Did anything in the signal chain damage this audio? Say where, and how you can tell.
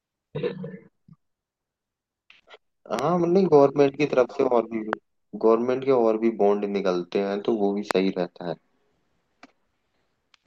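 Yes. There are three loud pops in this speech, each a single sharp click lasting about 20 ms: 2.99 to 3.01 s, 4.93 to 4.95 s, and 7.91 to 7.93 s. The first two peak roughly 15 dB above the speech and the third about 20 dB above it, while the speech continues beneath each one. The stage is likely the analogue wiring or interface, where a voltage step from a connector, switch or static discharge was added to the signal.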